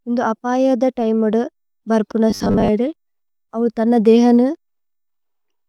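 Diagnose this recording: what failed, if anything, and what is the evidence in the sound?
From 2.30 to 2.68 s the speech hardens into a metallic 100 Hz buzz, robotic sound from repeated short buffers, likely driver-level underruns looping 10 ms blocks over about half the audio.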